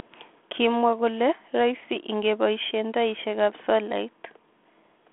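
Speech on a telephone-band line, nothing audible above about 3.8 kHz, and no faults present.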